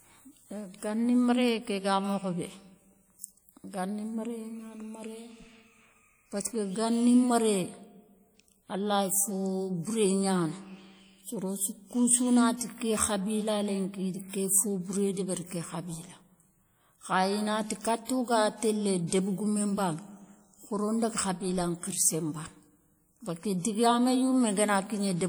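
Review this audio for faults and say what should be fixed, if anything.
The speech carries plainly audible codec damage from start to finish. Onsets ring, and sustained sounds turn washy. A hiss rises and falls with the signal. Content still extends to about 20.1 kHz. The cause is likely WMA compression at a rate that fits around 48 kbps. At that rate the transform coder spreads quantisation noise around each sound and drops weak detail. To prevent it, keep a lossless master and encode at a higher bitrate or with a better codec.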